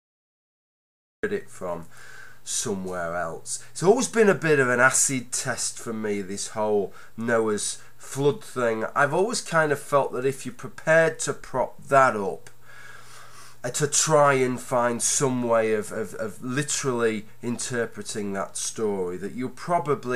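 From 0 to 1.23 s there is only digital silence, and at 1.23 s the audio begins abruptly, already partway through a sound. This is a cut-off start: capture or streaming began late, so whatever came before that instant was never recorded. Unlike a slow fade-in or a gentle natural onset, there is no rising edge at all. And unlike a dropout, the gap sits at the very start, with no earlier audio on its other side.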